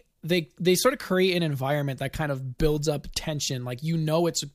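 No technical faults can be heard anywhere in the speech recording; the signal stays continuous throughout.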